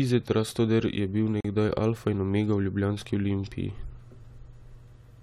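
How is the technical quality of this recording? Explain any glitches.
The speech has one glitch. A gap between stream segments at 1.41–1.45 s, just before "nekdaj alfa in omega", inserts about 40 ms of silence where segment timestamps fail to meet. It sounds like a hard-edged dropout and appears as a flat waveform line and a clean vertical blank on a spectrogram.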